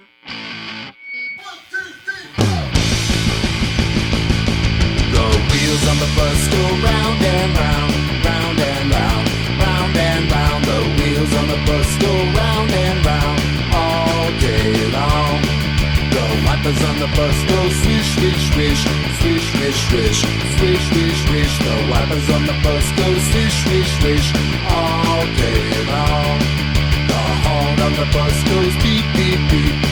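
No technical faults are audible.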